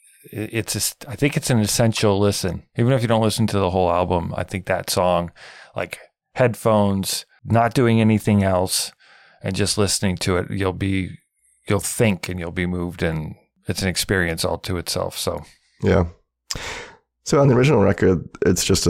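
Nothing in the speech stood out as a technical fault on listening.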